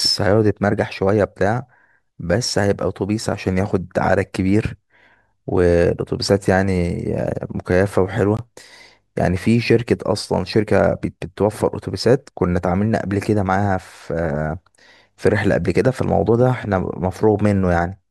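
The clip is speech with one fault, a gap at a join of encoded pieces. At 8.37 s the sound drops out for about 20 ms. The silence opens in the middle of continuous speech. Its edges are softened by the codec. The speech then resumes exactly where it stopped. Nothing is lost. This points to two separately encoded segments joined end to end without trimming. The encoder's start-up delay and the padding in its final frame remained at the seam.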